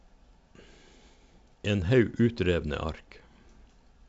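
No faults are audible; the speech comes through G.722 wideband coding at 64 kbit/s as expected, with the band ending near 7.7 kHz.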